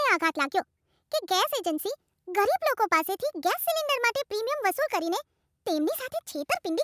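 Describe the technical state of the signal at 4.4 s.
At 4.4 s the speech is affected by a wrong sample rate, which runs through the whole clip. Playback is about 1.45 times too fast with no rate conversion, consistent with 22 kHz material played at 32 kHz, so voices sound hurried and raised roughly 6.5 semitones.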